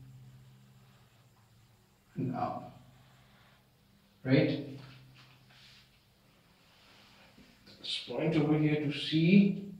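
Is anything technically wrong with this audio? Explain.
No, nothing technically wrong stood out on listening to this audio.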